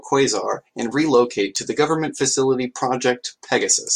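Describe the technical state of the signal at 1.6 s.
At 1.56 s, after "and relocate", a block of digital silence drops out about 5.8 ms. An unfilled buffer, fitting 256 samples, gives zeros and a tick or dip.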